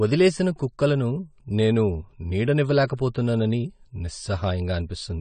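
Low-bitrate lossy encoding, likely AAC compression of the AAC-LC kind, runs through the whole of this speech recording. The damage is plainly audible from start to finish. Nothing survives above 9 kHz, because the encoder discarded the top band to spend its limited bits lower down. The speech sounds dull and band-limited throughout, which fits a stream squeezed to around 32 kbps.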